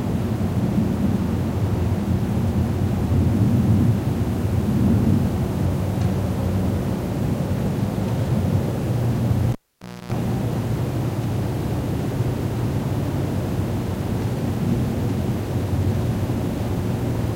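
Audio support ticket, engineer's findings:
Cable pulled and plugged in, 9.52–10.12 s: pop, about 0.55 s dropout, then 60 Hz mains buzz for roughly 0.29 s as the tip reconnects, second pop. Check the jack and lead.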